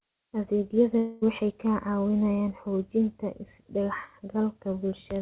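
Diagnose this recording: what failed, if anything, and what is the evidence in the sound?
Likely a long network dropout: from 0.98 to 1.24 s, the sound continues as a fading concealment buzz or hiss, then resumes with that stretch missing.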